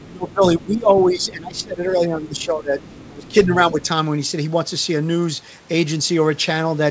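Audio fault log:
0.00–0.06, 1.58–1.64, 2.39–2.45, 2.83–3.08, 3.25–3.34, 3.84–3.88 s: other side's voice leaking through. A faint second voice, about 25 to 30 dB below the speech, likely residual loudspeaker echo. It shows on a spectrogram as harmonic traces under the main voice.
0.06–2.80 and 3.08–3.80 s: speech suppressed in double talk. The talker dips by as much as about 20 dB while the other side is active, likely from the echo canceller attenuating everything. The waveform envelope sags.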